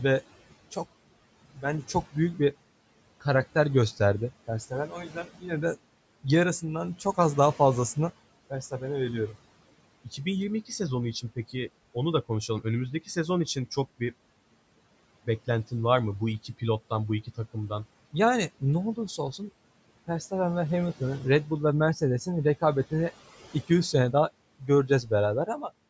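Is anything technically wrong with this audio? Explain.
Yes. The noise suppressor mistook parts of the speech for background noise and turned them down, cutting speech at 5.09–5.44 s just before "de yarısından çok az", then at 24.59–24.69 s and 24.87–25.11 s just after "sene daha". The level drops by about 12, 14 and 10 dB, over roughly a tenth of a second each time, so those sounds come across swallowed and faint.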